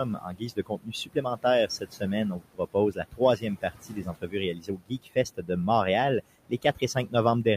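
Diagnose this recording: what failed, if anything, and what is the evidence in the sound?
Call processing failed at the noise suppressor. Noise suppressor artifacts run through the whole clip. Room noise, about 17 dB below the speech, sinks about 18 dB in the pauses and comes back under the talk. The suppressor is cutting the bands it judges to be steady noise, frame by frame.

Speech cut by the noise suppressor occurs at 0.05–1.45, 1.67–2.03, 2.32–2.75, 2.92–3.21, 3.37–4.35, 4.53–5.17, 5.37–5.5 and 6.49–7.14 s. Soft parts drop by up to about 19 dB and sound swallowed. The suppressor mistook quiet speech for noise and turned it down.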